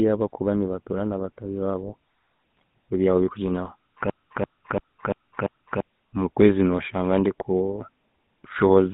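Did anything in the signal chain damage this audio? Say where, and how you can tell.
Yes, damage comes from three stages: the speech codec, the radio link feeding it, and the playback buffer.

Codec stage: the whole clip carries GSM full-rate coding, with the band held to roughly 150 Hz to 3.6 kHz and a plainly audible buzzy, gravelly texture, which fits the 13 kbps full-rate coder. That grain comes from rebuilding the voice from a vocal-tract filter excited by a sparse, regularly spaced pulse train. A plain telephone band-limit would sound dull but smooth, not rough like this.

Network stage: from 2.57 to 2.62 s there is a brief squawk and gargle, the signature of GSM bit errors. Corrupted filter, pitch or gain parameters make the decoder produce a wrongly shaped or mis-levelled frame. The roughly 50 ms span fits a few consecutive 20 ms frames. A dropped packet would leave a gap or a smoothed-over concealment, not this burst of garbled, distorted sound.

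Driver or buffer stage: from 4.10 to 5.80 s one 341 ms piece of audio repeats exactly five times, stuttering at 2.93 Hz. This is a system hang loop. The host stalled while the audio hardware kept replaying the same ring buffer, which fits a 16384-sample buffer. About one and a half seconds of real audio never comes out. Because every repeat is identical, it differs from packet-loss concealment, which repeats and fades short fragments.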